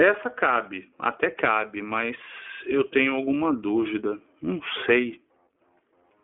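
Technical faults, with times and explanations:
Throughout, iLBC codec. The sound passes through a narrowband telephone line of roughly 250 Hz to 3.4 kHz. Nothing is heard above 3.6 kHz, so the speech loses its air and crisp consonants. The codec works in 20 ms frames and codes each frame's excitation on its own. This leaves a plainly audible rough, synthetic grain on the speech. The character fits iLBC's 15.2 kbps mode.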